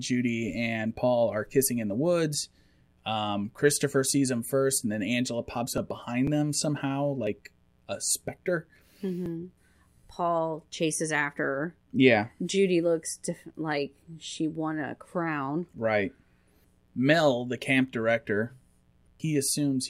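Switching spikes from the 60 Hz mains supply leak into the signal path twice per cycle, causing a mains buzz that runs under the speech for the whole clip. Its harmonics climb into the kilohertz range, so it sounds like a steady, raspy buzz, roughly 40 dB below the speech.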